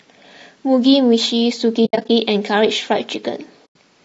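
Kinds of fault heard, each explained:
Low-delay AAC compression: The speech has a rough, grainy texture throughout, with noise filling the gaps between harmonics and a thin, somewhat artificial top end. This is likely low-delay AAC such as AAC-ELD, whose short frames resolve pitch structure poorly and leave fewer bits for detail. The damage is plainly audible and fits a low bitrate of around 32 kbps.
AAC frame loss with muting: Whole compressed frames went missing, and the decoder replaced each one with silence. The overlapping windows fade the sound out and back in, so each dropout is soft-edged. From 1.85 to 2.09 s, about 160 ms of audio is lost in pieces, with the longest gap around 70 ms. A second gap runs from 3.65 to 3.76 s and lasts about 100 ms.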